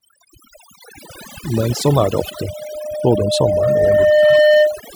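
A speech recording with overdone noise removal throughout: the reduction is set so aggressively that bands near the noise estimate are pulled down or cut entirely. The background collapses to near silence with twinkling specks, and the quieter parts of the voice are stripped away. From 1.87 s to 4.87 s there is a loudspeaker feedback squeal. The microphone is hearing its own loudspeaker, and at 606 Hz the loop gain exceeds one. That single tone swells steadily over about three seconds until it sits roughly 5 dB above the speech.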